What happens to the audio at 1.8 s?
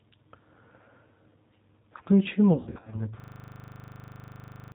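At 1.8 s the speech carries G.729 codec damage, present across the whole clip. Rebuilt from a vocal tract model and sparse pulses, it loses everything above 4 kHz and sounds plainly rough and synthetic, a buzzy texture a simple low-pass filter wouldn't add.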